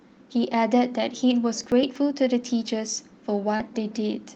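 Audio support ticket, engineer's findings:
Processor overload crackle, 1.61 to 1.96 s. Gritty tearing over the speech. Audio thread missing render deadlines: several consecutive buffers skipped outright, each leaving a hard-edged gap. Gap spacing fits a buffer of a few milliseconds. Clears once load drops.

Short concealed packet loss, 3.56 to 3.61 s. Brief smear in the speech. About 40 ms never reached the decoder in time. Jitter buffer/decoder concealment extended the preceding sound for 33 ms, then cross-faded back to real audio. Call codec band-limits the audio to about 8 kHz.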